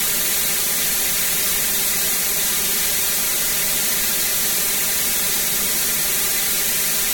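From start to end, the music shows channel delay comb filtering. One channel lags about five milliseconds, so mono summing cuts notches from around 100 Hz upward, sounding hollow.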